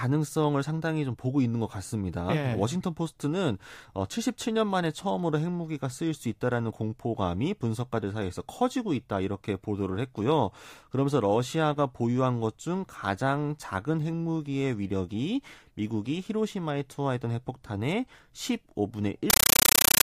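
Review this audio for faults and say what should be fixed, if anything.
From 19.3 s to the end at 20.04 s, the speech gives way to harsh, very loud chattering static. It is a compressed stream played as audio. An AC-3 bitstream reached the output as ordinary samples and was never decoded. Each frame becomes a burst of noise about 9.3 ms long, followed by digital silence. The bursts repeat 31.25 times a second. The density of the bursts points to a 448 kbps stream. To prevent it, decode AC-3 before output or pass it only to a receiver that decodes it.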